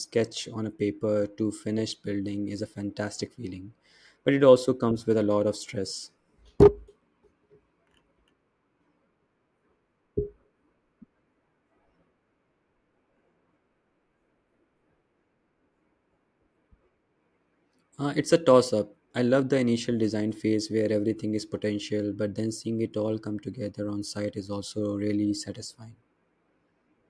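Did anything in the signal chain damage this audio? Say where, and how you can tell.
No, nothing stood out on listening to this speech recording that would point to damage anywhere in the signal chain.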